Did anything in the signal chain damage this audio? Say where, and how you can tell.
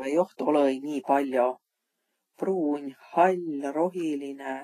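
Yes. Throughout the speech the treble sounds hissy and grainy, consonant attacks are smeared, and nothing sits above 14.2 kHz. The stage is likely the codec: Vorbis compression at a low bitrate, around 29 kbps, coarsely quantising high-frequency detail into noise-like residue.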